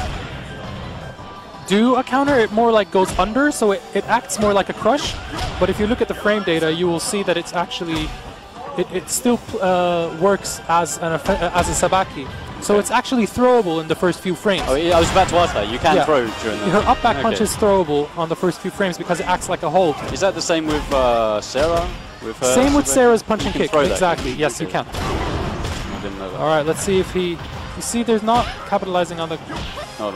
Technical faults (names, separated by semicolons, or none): unreliable data bit